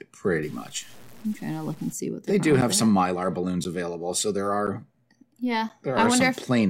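From 0.43 to 1.93 s the speech turns grainy, with a gritty distortion that tracks each syllable, most likely low bit depth without dither from truncation to about 7 bits. The error sits only around 30 dB below the signal, so the waveform shows visible stair-steps and the spectrogram shows broadband hash that appears and vanishes with the speech.

From 2.61 to 5.7 s, periodic USB or driver dropouts recur every 1.02 s, each removing roughly 10 ms of audio and leaving silence in its place. They are heard as evenly spaced ticks, and each one shows as a flat gap in the waveform and a thin vertical break in the spectrogram.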